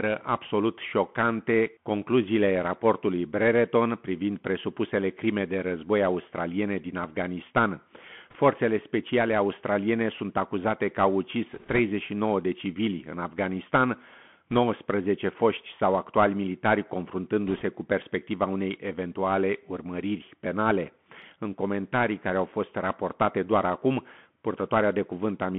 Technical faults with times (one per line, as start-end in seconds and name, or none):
0.00-25.58 Bluetooth CVSD headset codec
8.30-8.36 bit errors on a Bluetooth voice link
11.54-11.79 bit errors on a Bluetooth voice link
14.51-14.58 bit errors on a Bluetooth voice link
17.47-17.62 bit errors on a Bluetooth voice link